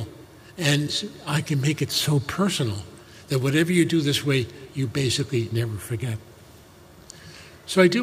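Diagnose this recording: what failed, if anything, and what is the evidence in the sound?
Nothing here points to a failure at any stage of the chain, so there's no problem to diagnose.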